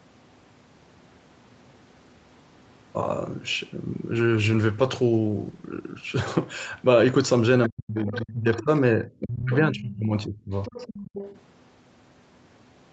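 From 4.14 to 6.65 s there is a call bitrate drop. The speech turns coarse and watery, and its top end closes in below the usual 8 kHz ceiling. The worst stretch lasts about 1.4 s. The sound fits the encoder being pushed from 32 kbps down to roughly 13 kbps after a fall in the bandwidth estimate. Unlike echo-canceller ducking, the level holds steady and only the texture and brightness degrade, easing back as the rate recovers.

From 7.69 to 8.69 s, speech suppressed in double talk sets in. The voice is pushed down in pieces, by up to about 40 dB at its deepest, across roughly 0.7 s of that span. The likely cause is the echo canceller treating the near talker as echo while both sides were speaking, and attenuating everything. Inside this window, at 8.06 to 8.25 s and again around 8.6 s, faint fragments of the other side's voice leaking through can be heard, about 15 dB below the talker. That pairing of gaps and stray foreign speech separates it from packet loss, which leaves gaps without a second voice.

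A second suppression runs from 9.06 to 10.51 s. The talker dips by up to about 30 dB for roughly a second in total.

Right after it, from 10.54 to 11.4 s, the other side's voice leaks through for a longer, continuous stretch, about 20 dB down. It is likely residual loudspeaker echo getting past cancellation, not crosstalk in the talker's own channel.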